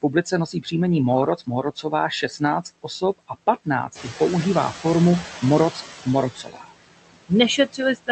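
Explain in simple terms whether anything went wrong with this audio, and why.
Yes, a few things went wrong, and they all come from the noise suppressor fighting the background noise in this speech.

Throughout the clip you can hear noise suppressor artifacts. The suppressor keeps pushing down whatever it thinks is steady hiss, frame by frame, so the background dips in the pauses and creeps back up under the talking.

Several times the suppressor gets overeager and grabs bits of speech along with the noise: around 0.52 to 0.73 s, 1.36 to 1.93 s, 2.22 to 2.42 s, 2.83 to 3.36 s, 6.35 to 6.85 s and 7.57 to 8.09 s. That's speech cut by the noise suppressor. Soft sounds and word endings get turned down as if they were hiss, so they sound swallowed or faint. In each stretch only part is actually hit, and the 6.35 s one is the longest and deepest.

Around 4 s the room noise jumps up noticeably, and from 3.95 to 5.87 s you hear the noise suppressor catching up. 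Its picture of what counts as background is still based on the quieter noise from before, so at first the louder noise slips through with less reduction. Then, over roughly two seconds, it adjusts and the noise settles back down.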